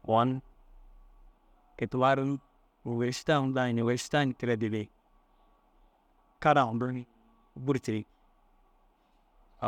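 Speech recording with no audible technical faults anywhere.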